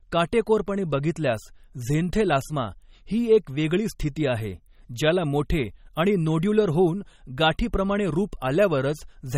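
A speech clip with plainly audible MP3 compression damage throughout. Nothing is heard above 16.4 kHz. Weak frequency lines flicker on and off between frames, giving a watery, swirly texture and smeared attacks. The likely cause is a low bitrate, around 32 kbps.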